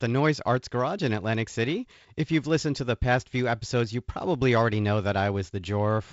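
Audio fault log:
The speech carries the response of G.722 wideband telephone coding, with nothing above about 7.7 kHz and only light coding noise that fits the 48 kbit/s mode, and no fault is present.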